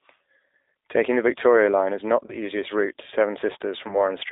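Throughout, the speech sounds narrow, slightly rough and synthetic, with nothing below about 300 Hz or above about 3.7 kHz. This is the G.729 codec, which fits an 8 kbit/s stream rebuilding the voice from a vocal tract filter, pitch predictor and a few pulses.

From 2.27 to 2.36 s, between "is not" and "easiest route to", the voice briefly smears into a stretched, fading sound. This is VoIP packet loss concealed by the speech codec, consistent with one 20 ms packet missing, the decoder extrapolating from its last pitch and filter, and recovery lagging.

The same concealment recurs from 3.88 to 4.01 s, again pointing to about 20 ms of lost audio stretched into a fading sound.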